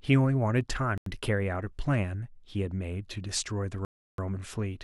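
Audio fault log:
0.98–1.06 s, 3.85–4.18 s, Bluetooth stall: speech drops to silence for 86 ms and 333 ms, then resumes, likely because delayed wireless packets emptied the headphone buffer.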